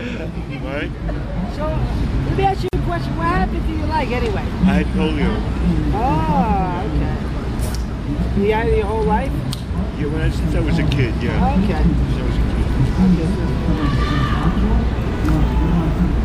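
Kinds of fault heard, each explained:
Gap at a join of encoded pieces: separately encoded pieces joined untrimmed leave encoder delay and padding, opening a 46 ms gap at 2.68 s; unlike a dropout, sound resumes exactly where it stopped.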